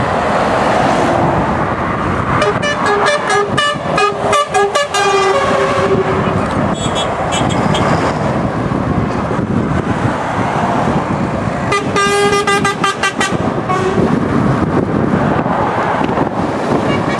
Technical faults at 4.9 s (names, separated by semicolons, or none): none